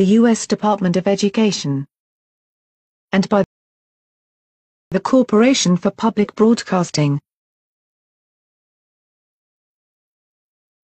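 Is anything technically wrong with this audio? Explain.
Yes. From 3.44 to 4.92 s there is a rebuffering stall: playback exhausted its downloaded audio and halted, adding about 1.48 s of silence before resuming at the exact point it stopped. The waveform shows a flat gap there; the spectrogram, a blank vertical band.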